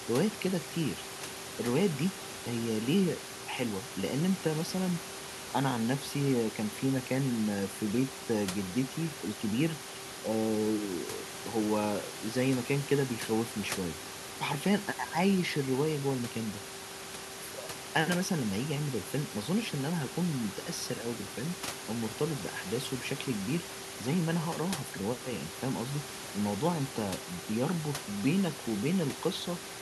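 A speech recording with no technical faults to report. Some background noise from the room can be heard beneath the speech, about 14 dB below it, and it belongs to the recording itself rather than to the system.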